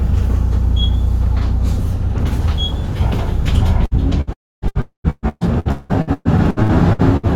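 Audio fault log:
3.85–3.94 s and 4.21–4.30 s, burst of packet loss: about 60 ms vanishes each time, bridged by a brief held, fading continuation of the preceding sound, too short to reach silence.
4.33–4.65 s, long network dropout: the sound stretches into a fading tail, then about 0.27 s of silence, likely a stall in delivery, unlike the brief bursts that never go quiet.
4.68–7.26 s, repeated packet loss (robotic sound): 13 gaps, the longest 0.18 s, patch about 39% of this span, so the sound turns choppy rather than breaking once.
4.81–5.07 s, long network dropout: inside that choppy stretch, about 0.24 s goes missing, with a fading fill and then about 0.11 s of silence before the sound returns.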